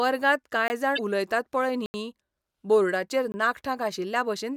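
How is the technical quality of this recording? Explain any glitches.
The recording has four audible glitches: three dropouts and one burst of corrupted decoding.

The block of digital silence occurs at 0.68 to 0.70 s (20 ms), 1.86 to 1.94 s (80 ms) and 3.32 to 3.34 s (20 ms). The samples were zeroed, probably because the output buffer wasn't filled in time. The speech cuts abruptly to silence and back. The gaps sound like short holes, the 80 ms one the longest.

Damaged data in a compressed stream appears at 0.95 to 0.99 s. Corrupted bytes made the decoder misread frames and resynchronise at the next header. It is heard as a brief disruption in the speech. Unlike the dropouts, it comes from the decoder losing sync rather than from a late buffer.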